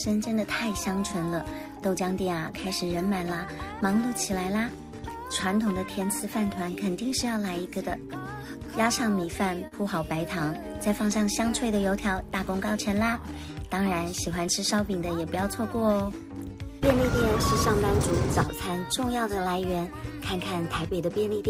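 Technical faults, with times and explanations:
9.67 to 9.74 s, short concealed packet loss: a brief smear passes through the sound, a moment where it seems to hang and waver before settling back. About 40 ms of audio never reached the decoder in time, so the receiver covered the gap by extending what it had last heard, synthesising roughly 39 ms of stand-in signal, then cross-fading into the real stream once it resumed, which produces the blurred joint.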